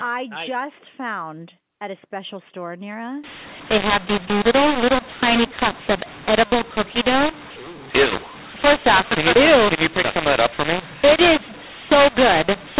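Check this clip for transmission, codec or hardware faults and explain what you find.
One fault is present: a mu-law and A-law mix-up running from 3.24 s, right after "a special store near", to the end at 12.80 s. The signal was coded as A-law but decoded on the mu-law curve. Sample levels are remapped inconsistently, some too loud and some too soft, and near-silent samples are pushed well up. The speech turns harsh and distorted, and pauses fill with noise. The G.711 telephone coding's 4 kHz band limit is audible throughout.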